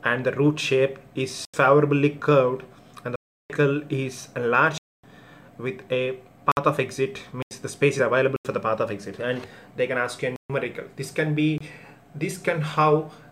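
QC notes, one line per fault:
1.45–1.54, 3.16–3.50, 4.78–5.04, 6.52–6.57, 7.42–7.51, 8.36–8.45, 10.36–10.50 and 11.58–11.61 s: block of digital silence. The sound cuts to silence for 23 to 341 ms with no fade. The recurring 85.33 ms holes fit a 4096-sample buffer left unfilled. Unlike a fading dropout, the gaps start and end abruptly.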